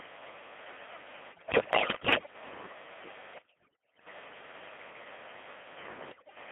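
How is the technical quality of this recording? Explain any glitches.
Quality is poor. The whole recording passed through a very low-rate vocoder, and three stretches are further broken by transmission errors.

Codec 2 vocoder, throughout: The audio points to Codec 2 at about 2.4 kbit/s. Only pitch, voicing, energy and a spectral envelope survive. The decoder rebuilds the speech from sine waves. So the voice sounds robotic and buzzy, confined to roughly 250 Hz to 3.4 kHz.

Bit errors on digital voice radio, at 1.32–2.34 s, 3.34–4.06 s and 6.12–6.36 s: Around one bit in ten arrives flipped. Each corrupted bit misdirects a whole frame's pitch, level or spectrum. The voice lurches in pitch and loudness, and dissolves into bleeps, warbles and synthetic gibberish.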